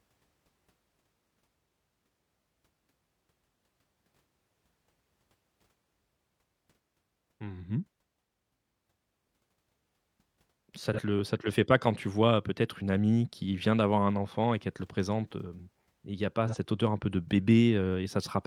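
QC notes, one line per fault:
10.93–10.99 s, AAC frame loss with concealment: just before "le ça te le", one frame, about 43 ms of audio, fails to arrive. The decoder rebuilds the gap from the last good spectrum, so the sound there turns briefly smeared and noisy rather than dropping out.
16.48–16.56 s, AAC frame loss with concealment: between "il y a pas" and "odeur un peu de", another single 43 ms frame is lost. The same spectral patch-over leaves a short phasey, blurred spot.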